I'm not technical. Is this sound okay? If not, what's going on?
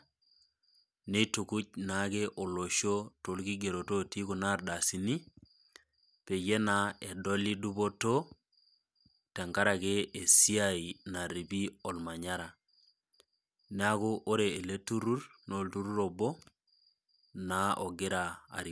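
Yes, nothing stood out as a problem when listening to this recording.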